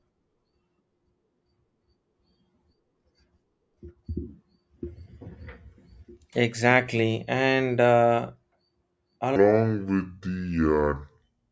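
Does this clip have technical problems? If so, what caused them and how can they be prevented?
Yes. From 9.36 s to the end of the clip at 11.51 s there is a wrong sample rate fault: the speech abruptly drops to about two-thirds speed (0.667×) and its pitch falls by about 7 semitones, so it sounds low, slow and drawn out. Speed and pitch shift together by the same ratio, which fits audio recorded at 24 kHz being played back at 16 kHz without resampling. To prevent it, carry the true sample rate with the audio and resample explicitly wherever the playback rate differs.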